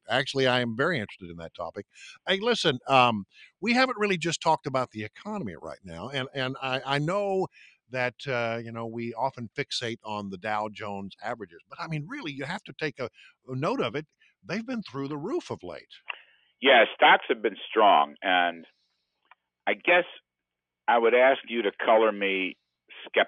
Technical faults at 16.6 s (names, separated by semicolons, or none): noise suppressor applied to music or sounds